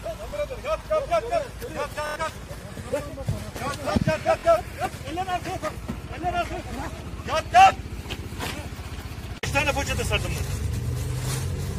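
Repeated buffers occur at 0.30–0.33 s, 2.07–2.16 s, 4.39–4.44 s and 5.74–5.76 s. Each time new audio arrived late, so playback repeated the last chunk, about 23 ms long, which fits a 1024-sample buffer. The chunk sounds twice at the first and last points, three times at 4.39 s and five times at 2.07 s. This is heard as a brief stutter or buzz, and roughly 20 to 100 ms of audio is skipped. On a waveform the identical blocks appear side by side with abrupt joins. A spectrogram shows matching slices separated by thin vertical lines at each join.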